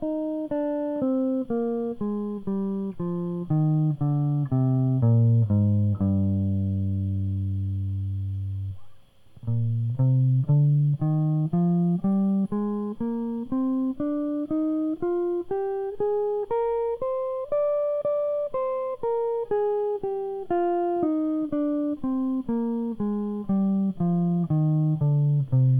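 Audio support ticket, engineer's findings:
Music signal checked throughout with no audible defect found in the playback chain, nothing to attribute to any component.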